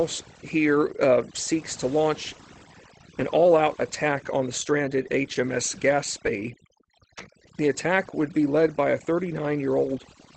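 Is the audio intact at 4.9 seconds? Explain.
No. Overdone noise removal is present at 4.9 s, as it is across the whole clip. The noise reduction was set so aggressively that any frequency band sitting near its noise estimate is pushed far down or shut off, and the quieter parts of the speech get caught with it. Around 4.9 s the background drops and breaks up into twinkling, warbling specks. The call codec's upper limit near 8 kHz also applies there.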